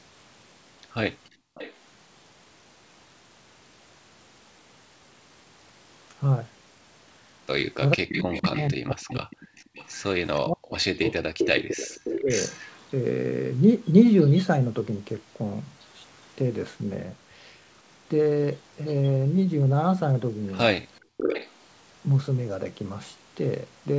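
From 1.25 to 1.74 s there is an echo leak: the far end's echo canceller likely failed to cancel all of what its microphone picked up from the loudspeaker, so the talker's own voice returns about 461 ms late and about 20 dB down, a faint repeat trailing the original. Inside that window, from 1.31 to 1.55 s, the background is gated by the echo canceller. It clamped the microphone while the loudspeaker played, and the room sound drops by about 34 dB for roughly 200 ms before springing back.

From 7.94 to 9.49 s, speech is suppressed in double talk. With both sides speaking, the canceller likely could not tell local speech from loudspeaker echo and attenuated both. The voice dips by up to roughly 40 dB, totalling about 1.5 s. Overlapping this, from 8.12 to 12.92 s, a longer echo leak returns the voice 491 ms late at about 10 dB below the speech. The same double-talk suppression recurs from 10.42 to 12.29 s, cutting about a second of speech by up to roughly 40 dB.

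A third echo leak, from 20.95 to 21.5 s, is the strongest: the echo sits about 526 ms behind and only about 5 dB below the speech. From 21.01 to 21.17 s the canceller gates the background again, cutting the room sound by about 36 dB for roughly 150 ms. Throughout, the call codec's band limit removes everything above 8 kHz, which fits G.722.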